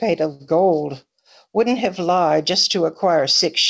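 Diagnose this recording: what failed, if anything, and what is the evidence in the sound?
A short stall from a late packet hits the network and jitter buffer stage around 0.34 to 0.42 s. The speech holds a sound unnaturally long, stretched by about 58 ms, with a faint buzzy sustain. Nothing's lost; playback resumes where it left off, just 58 ms later.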